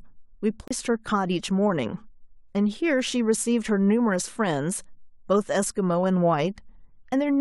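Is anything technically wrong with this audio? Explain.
Yes, there's a CD skip at 0.68 s. The laser got knocked or hit a flaw and jumped to another turn of the disc's spiral, so the player briefly mutes, about 30 ms, then the speech resumes from a different spot.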